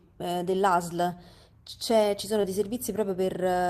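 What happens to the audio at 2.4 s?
At 2.41 to 2.45 s there is short concealed packet loss: about 20 ms of speech never arrived, so the decoder extended the preceding sound and blended back, leaving a brief smear.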